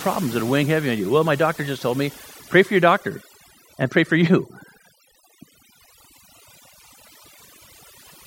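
From start to finish, the speech carries overdone noise removal. A noise reducer was pushed too hard. It cut individual frequency bands near its noise estimate, taking quiet speech detail too. The background drops and breaks up into twinkling specks.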